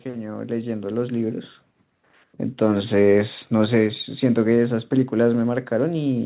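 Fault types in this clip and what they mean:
Automatic gain rising: the level control judged the input too quiet and raised its gain by about 7 dB from 0.05 to 1.48 s, swelling speech and background together; the waveform envelope widens steadily, and the spectrogram brightens across the band below 4 kHz.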